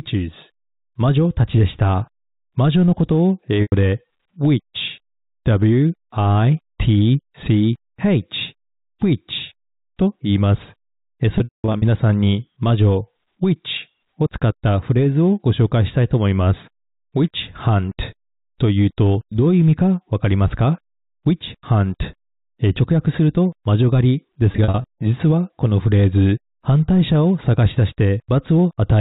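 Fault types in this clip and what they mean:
Packet loss with pitch repetition: lost stretches are bridged by repeating the last pitch cycle, so short gaps sound like a held buzz rather than a click, while longer ones fade into silence. It occurs at 3.62 s (100 ms), 11.38 s (300 ms over 440 ms, fading into silence) and 24.52 s.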